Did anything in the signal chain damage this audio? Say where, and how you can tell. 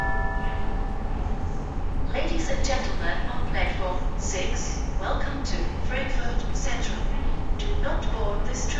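No, nothing in the chain.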